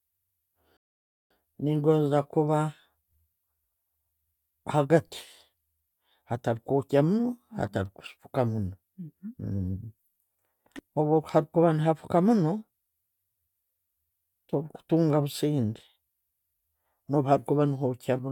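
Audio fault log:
0.77–1.31 s, rebuffering stall: the speech drops to dead silence for about 0.54 s, then picks up again exactly where it left off. Nothing gets skipped or repeated, so the pause is pure added time. What you're hearing is the player running dry on downloaded audio and having to wait for more data before it can carry on. That's why the gap is clean silence instead of a glitch or a jump.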